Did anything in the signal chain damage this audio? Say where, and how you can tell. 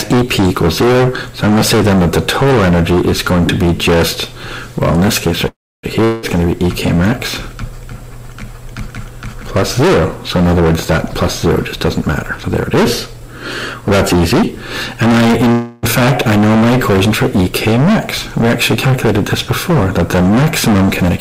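Yes. Hard clipping runs throughout, from a converter or format stage. It is overdriven by about 23 dB, with roughly a third of samples flattened, giving harsh fuzz on every loud sound.

Call audio freezes occur at 5.47 to 5.85 s and 15.52 to 15.85 s. The sound stretches into a fading buzz, then resumes intact. This is likely packets held up and the jitter buffer running empty.

A long network dropout occurs at 6.04 to 6.25 s. A decaying buzz covers the gap, and about 0.18 s of sound is lost. Packet loss on the network is the likely cause.

Jitter buffer speed-up occurs at 10.60 to 15.13 s, running 8% fast with roughly 0.4 s trimmed, and again at 21.04 to 21.20 s at 140%. Pitch stays unchanged while pacing hurries.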